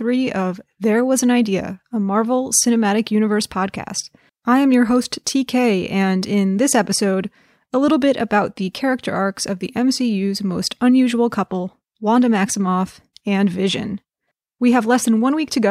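Nothing here sounds wrong: the speech runs along with no glitches, dropouts or other technical faults to point to.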